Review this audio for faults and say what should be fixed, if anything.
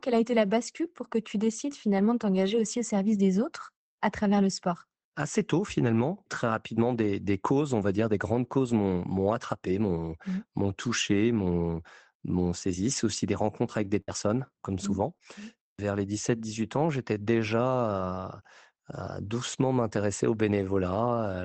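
Lost packet rebuilt from error correction occurs three times, at about 7.81 s, 8.35 s and 8.43 s, each a single 20 ms frame. The lost packets were replaced by the low-bitrate copies carried in the following packets, so there is no dropout, only a brief patch of rougher, noisier texture. Unlike a concealed gap, nothing is smeared or stretched, because real content is present, just coarser. Raising the error-correction redundancy or the bitrate would make these frames cleaner.

Scattered short gaps run from 13.65 s to 15.22 s. There are about three holes, the longest roughly 70 ms, and about 100 ms is patched in total, around 7% of that stretch. Each hole was filled by extending the last sound, which produces small ticks, smears or hiccups. This differs from the rebuilt frames above: here the original content is gone and has been replaced by a drawn-out continuation, not a rough copy. The call path's roughly 8 kHz bandwidth cut-off stays constant through these gaps, which fits the Opus setup at a modest bitrate. 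A larger jitter buffer or in-band error correction covering this stretch would prevent these gaps.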